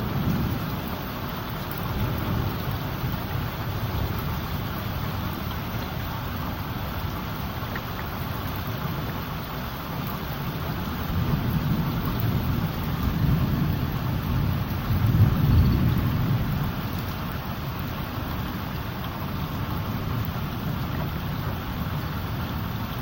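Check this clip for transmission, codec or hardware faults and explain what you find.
The clip of sounds has one fault: corrupt frame decoded, at 5.33 to 5.36 s and 7.16 to 7.18 s. Frames with flipped bits were decoded anyway, sending energy to wrong frequencies. Each is a brief chirp, squeak, blip or noise burst. The first spans about two frames and is louder.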